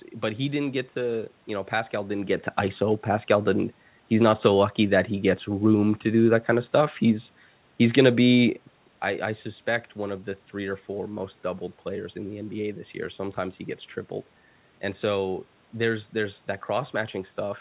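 No technical faults are audible.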